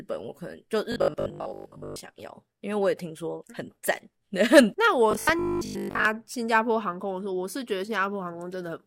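From 0.92 to 2.04 s and 5.11 to 6.05 s, the speech turns into a rigid 50 Hz buzz. This is robotic sound from repeated short buffers. A 20 ms chunk is likely replayed over most of the missing audio.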